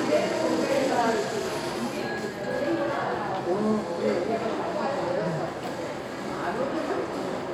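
Nothing here stands out as a technical fault; the everyday sounds come through without any glitch, dropout or distortion catching the ear.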